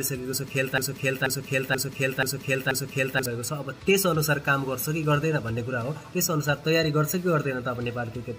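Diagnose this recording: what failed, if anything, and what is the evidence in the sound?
A broken-record loop runs from 0.78 s to 3.26 s: the same fragment, about 0.48 s long, plays five times back to back with identical content each pass, and whatever should have filled that span never arrives. This likely points to a stall in the playback or stream buffer, which kept re-sending the last block it held. Unlike an echo or reverb tail, the repeats do not decay. Unlike a stutter, each pass is a long, whole fragment rather than a brief glitch.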